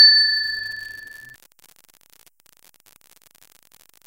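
An unreliable data bit runs throughout, one marginal bit flipping randomly and adding equal spikes of about -24 dBFS, heard as a steady crackle persisting through pauses.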